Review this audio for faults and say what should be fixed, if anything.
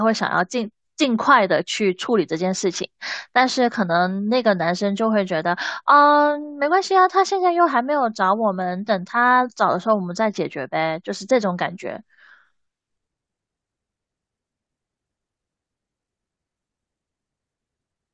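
Nothing in this recording needs fixing, as no technical fault can be heard anywhere in it. With no fault to place in time or trace to a cause, no preventive step is needed.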